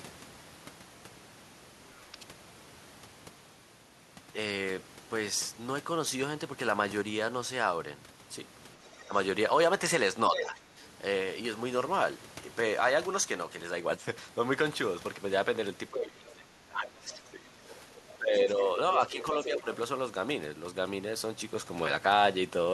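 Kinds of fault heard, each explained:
speech suppressed in double talk: The talker's level dips while the far side also talks, likely because the echo canceller turned everything down. Brief dips at 9.03–9.1 s, 10.29–10.8 s and 19.12–19.67 s; the deepest, about 20 dB, spans 15.9–18.61 s. Unlike leakage, nothing is added.
other side's voice leaking through: A second voice appears beneath the talker, likely echo the canceller failed to remove, at 10.35–10.49 s (about 5 dB below), 17.69–17.75 s (about 25 dB below) and 19.21–19.6 s (about 10 dB below). This adds sound rather than muting it.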